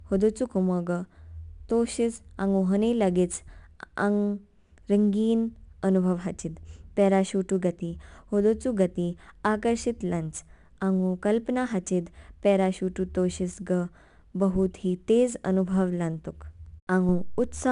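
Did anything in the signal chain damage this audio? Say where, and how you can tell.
Yes. Throughout the speech, a gritty hiss rides on every loud syllable, sharp onsets sound roughened, and nothing remains above 10.6 kHz. This is 4-bit ADPCM compression at the codec stage: each sample is coded as a coarse adaptive step, consistent with about 89 kbps.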